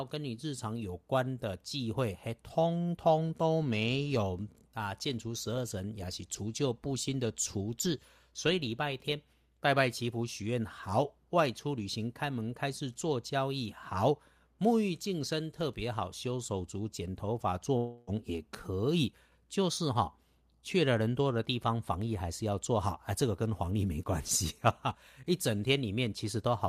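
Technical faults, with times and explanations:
17.77 to 18.10 s, long network dropout. About 0.3 s of speech goes missing. A fading buzz continues the last sound across the gap, with no true silence. Speech then resumes without the lost part, likely after incoming audio stopped arriving.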